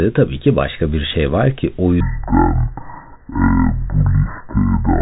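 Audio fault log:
2.00–5.02 s, section at the wrong speed: right after "şey var ki o", the audio was likely played out against the wrong clock at 0.527 times its recorded rate, so the speech slows to roughly half pace and drops about ten semitones, turning deep and dragging to the end.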